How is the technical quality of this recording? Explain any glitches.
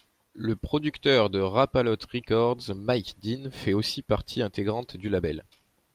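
No glitches or technical faults can be heard here.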